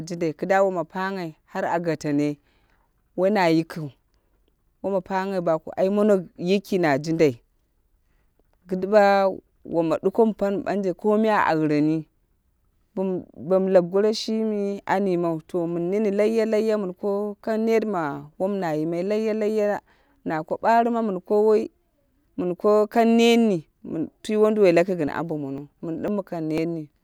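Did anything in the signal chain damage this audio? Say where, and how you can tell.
Yes. Near the end, from 25.08 s to 26.58 s, the speech picks up a run of small, evenly spaced ticks, about four of them, one every 0.5 s. Each is a tiny jump where roughly a millisecond of audio is skipped rather than silenced, so the waveform lurches forward. These are periodic USB or driver dropouts at the driver and buffer stage: a background task repeatedly stalls the USB bus or audio driver, and samples go missing each time.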